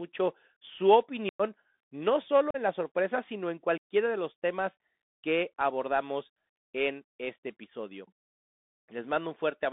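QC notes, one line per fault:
Throughout: Bluetooth CVSD headset codec. The speech is confined to a narrow telephone band of roughly 150 Hz to 3.6 kHz, which fits a 64 kbit/s CVSD link. The codec's one-bit up/down coding lags behind fast, loud high-frequency movement, so s sounds turn scratchy and louder peaks smear into distortion. A grainy hiss from the constant step hunting sits under the speech. The damage is plainly audible.
1.29 s, 2.51 s and 3.78 s: unconcealed Bluetooth headset packet loss. Three short holes open in the speech, lasting about 105 ms, 38 ms and 90 ms. Each cuts in and out abruptly rather than fading, because nothing fills the missing audio. The first and third gaps are long enough to point to roughly fifteen and ten lost packets. After each dropout the CVSD stream restarts from a small step size, so the speech returns briefly quieter before it recovers.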